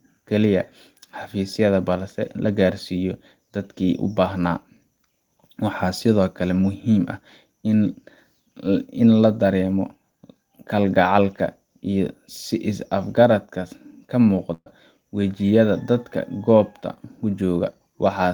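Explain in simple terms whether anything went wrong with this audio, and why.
Yes, one thing went wrong: a burst of packet loss at about 14.53 s, lasting until 14.68 s. A short run of the speech never arrived, so the player stretched out the last bit of sound, fading it down, for roughly 0.13 s, went briefly quiet, then jumped ahead.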